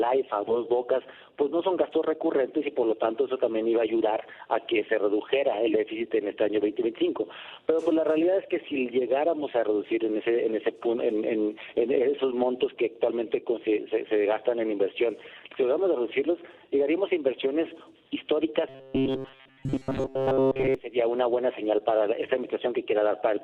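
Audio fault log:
18.69–20.75 s, robotic sound from repeated short buffers: the sound turns into a rigid, metallic buzz locked near 133 Hz, most likely because audio arrived too slowly and the player kept re-sending its last block of about 7.5 ms, which fits a very short buffer, while most of the fresh material in this span was skipped. Unlike a stutter that loops audible chunks, the repeats here are too short to hear individually and fuse into one fixed pitch.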